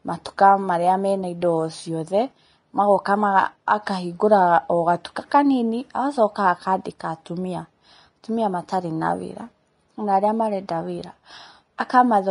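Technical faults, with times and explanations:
Throughout, Vorbis compression: the speech has plainly audible codec damage, with nothing above about 10.6 kHz and a grainy, hissy quality to the upper range. Consonant attacks blur, and tonal parts sound roughened. This is likely a low-bitrate Vorbis encode, roughly 32 kbps by the sound of it. At that rate the encoder drops the top band and quantises the remaining treble so coarsely that fine detail turns into noise of similar energy.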